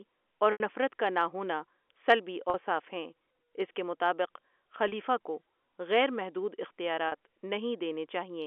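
Packets dropped from this speech stream four times, at 0.52 to 0.60 s (an 80 ms gap) and at 2.50 to 2.54 s (after "ہونا سلبی", before "ہیں اس کے مطابق"), 4.88 to 4.92 s (before "کو غیر"), and 7.08 to 7.12 s (40 ms each, consistent with 20 ms packets). This is packet loss with pitch repetition: the receiver loops the last pitch cycle, so each gap sounds like a briefly held, buzzy tone, fading on the longer first one. The narrowband telephone sound of the G.711 line is audible throughout.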